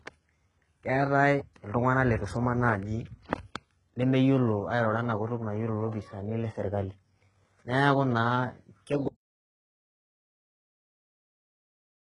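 A low-bitrate encode has likely passed this speech through HE-AAC compression, which fits a stream of around 12 kbps. At that rate only the lower band is coded properly, and the treble is rebuilt by copying lower bands upward under a coarse envelope. Throughout the clip the top end sounds synthetic rather than original, with nothing above 11 kHz. The damage is heavy: s sounds turn gritty and lispy, with a metallic edge where the rebuilt harmonics fail to line up.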